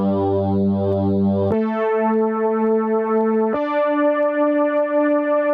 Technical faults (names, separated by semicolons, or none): gain pumping